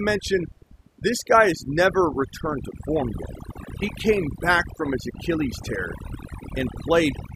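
Overdone noise removal runs throughout: the reducer was set too hard, cutting bands near its noise estimate, leaving twinkling near-silence and stripping away the quiet parts of the speech.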